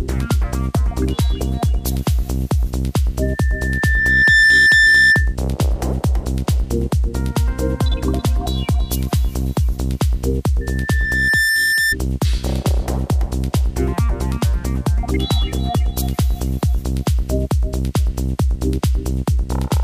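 Loudspeaker feedback squeal rises from 3.22 to 5.35 s and again from 10.61 to 11.96 s. A microphone re-amplifies its own loudspeaker until a 1.8 kHz tone grows over about a second, first about 5 dB above the sound, then level with it. A spectrogram shows one brightening horizontal line.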